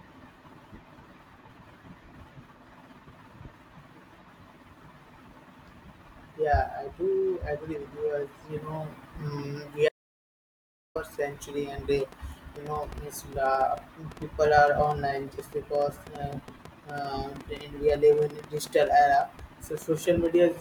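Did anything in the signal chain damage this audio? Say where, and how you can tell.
Yes. An audio dropout to silence runs from 9.89 s to 10.95 s, cutting about 1.07 s out of the speech. The signal stops abruptly mid-flow and the gap is silent, with no room tone or noise floor beneath it, so nothing was reaching the recorder. That points to the input stage rather than a codec: the likely cause is a lost device connection or link, or a mute, while the recorder kept writing silence.

A train of clicks begins at 12.00 s and continues to 20.36 s, near the end. It runs at about 6.6 clicks per second with uneven spacing, around fifty clicks in all, each about as loud as the speech itself. The clicks share one shape and tick through the pauses as well as over the speech, so they were added to the signal rather than coming from the source. The likely cause is electrical interference in the analogue wiring or a faulty connection or power supply.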